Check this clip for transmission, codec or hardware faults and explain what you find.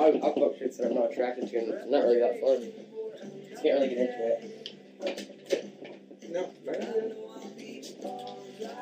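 Nothing faulty can be heard anywhere in this recording.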